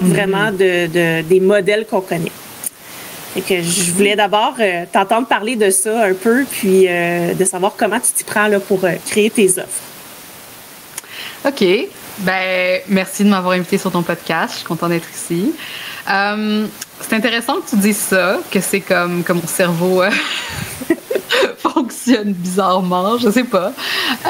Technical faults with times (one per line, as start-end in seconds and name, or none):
0.00-24.30 gain pumping